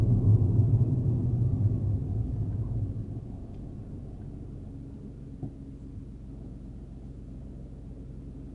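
The whole recording carries 4-bit ADPCM compression, and the damage is plainly audible. Each sample is coded as a coarse 4-bit step from a predicted value, so a rough, gritty hiss rises and falls with the level of every loud sound, and sharp onsets smear or crunch where the adaptive step lags behind. Nothing remains above 10.6 kHz, which dulls the top end and fits a sample rate near 22 kHz, in line with a data rate of roughly 89 kbps.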